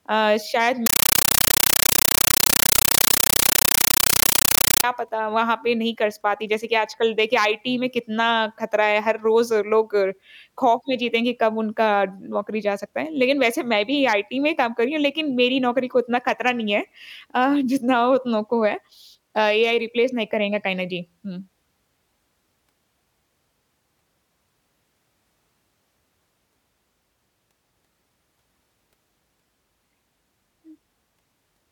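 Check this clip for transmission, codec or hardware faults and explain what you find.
There's one clear fault here, a compressed stream played as audio, running from 0.86 to 4.84 s. The speech drops out and is replaced by harsh, very loud chattering static. What's happening is that a Dolby Digital (AC-3) bitstream is being passed through as if it were ordinary PCM samples instead of being decoded. Each frame turns into a 9.33 ms burst of noise followed by silence from the zero padding, repeating at 31.25 per second. That pattern fits a 448 kbps AC-3 stream.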